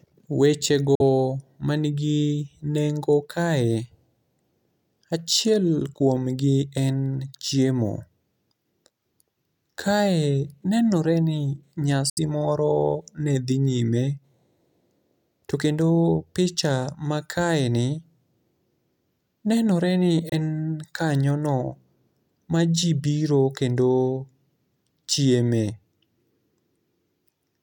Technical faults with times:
0.95-1.01 Bluetooth dropout
12.09-12.19 Bluetooth dropout
20.29-20.34 Bluetooth dropout

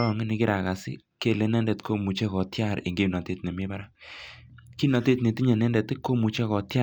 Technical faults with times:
3.29-4.28 CD scratch ticks

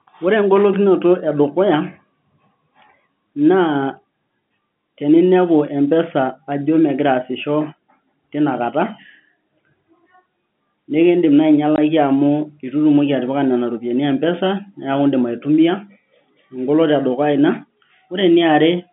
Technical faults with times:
11.76 packet loss filled with silence

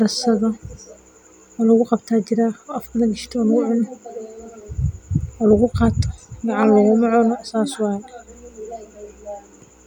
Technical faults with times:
7.24 dropped samples

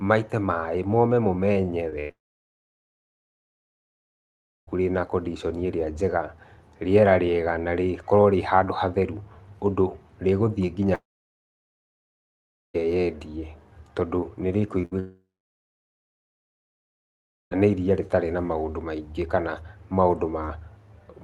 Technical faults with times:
1.89-1.94 short concealed packet loss
2.00-2.11 burst of packet loss
2.11-4.69 long network dropout
10.95-12.76 long network dropout
14.82-14.85 short concealed packet loss
14.85-14.93 burst of packet loss
14.99-17.53 long network dropout

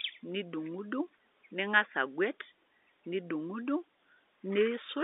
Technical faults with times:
none

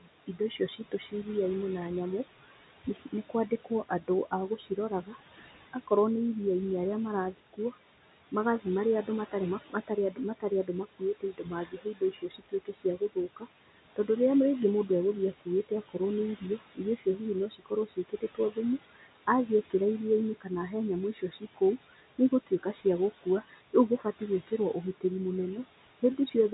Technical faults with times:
0.00-26.53 noise suppressor artifacts
0.01-1.13 speech cut by the noise suppressor
2.49-5.89 speech cut by the noise suppressor
7.33-7.74 speech cut by the noise suppressor
8.32-14.09 speech cut by the noise suppressor
14.88-19.74 speech cut by the noise suppressor
20.41-25.04 speech cut by the noise suppressor

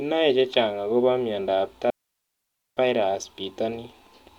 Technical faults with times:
1.90-2.77 digital wireless dropout

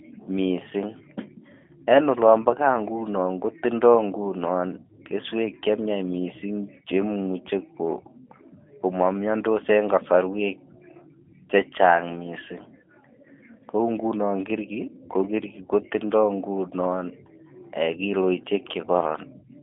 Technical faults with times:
0.00-19.62 G.729 codec

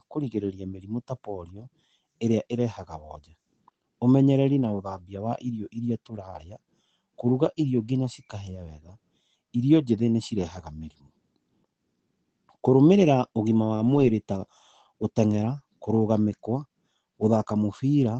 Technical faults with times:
2.27-2.33 lost packet rebuilt from error correction
10.37-10.43 lost packet rebuilt from error correction
13.75-14.09 lost packet rebuilt from error correction
15.29-15.43 lost packet rebuilt from error correction
16.29-16.35 lost packet rebuilt from error correction

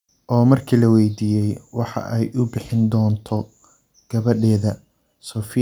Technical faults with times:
none

